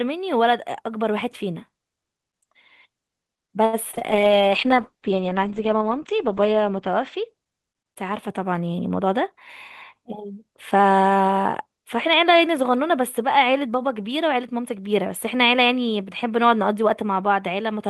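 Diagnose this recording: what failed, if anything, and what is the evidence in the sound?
Network first: repeated packet loss from 3.65 to 4.03 s, four gaps (longest 76 ms) patched by stretching the last sound, so the speech turns choppy and robotic.

Codec next: a call bitrate drop from 4.11 to 8.47 s, 40 down to 10 kbps, with the band shrinking from 20 kHz to 8 kHz, giving muffled, watery speech.

Then the jitter buffer speed-up at 14.23 to 14.77 s: it trimmed around 70 ms of pitch periods, so the speech runs at 110% without changing pitch.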